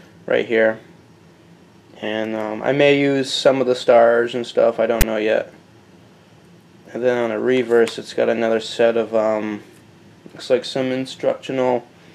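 File tags played as audio at 5.01 to 5.03 s: a text tag block decoded as samples gives a hard-edged, offset rasp, then silence where zero padding follows.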